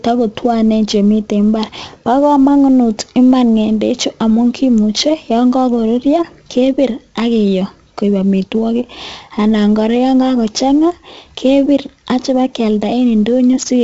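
A gritty hiss rides on the speech from start to finish, swelling with every louder syllable and roughening the sharp onsets into a brief crunch, while the top end stops dead near 7.8 kHz. The damage is heavy, typical of 4-bit ADPCM compression: each sample is coded as a coarse step from a prediction, so the error follows the signal's level, and the step size lags on fast attacks. At 64 kbps this fits a 16 kHz sample rate.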